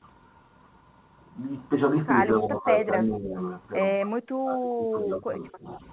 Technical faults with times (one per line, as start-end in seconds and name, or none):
2.41-2.69 speech suppressed in double talk
3.02-3.36 speech suppressed in double talk
4.01-5.66 speech suppressed in double talk